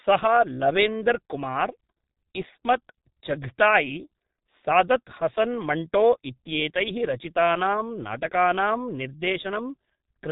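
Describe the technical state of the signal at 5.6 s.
At 5.6 s the speech is carrying heavy G.723.1 codec damage, as it does across the whole clip. Nothing gets through above 3.8 kHz, and the coarse, slowly updated voice model, which fits a rate near 6 kbit/s, leaves it muffled and hoarse with smeared consonants.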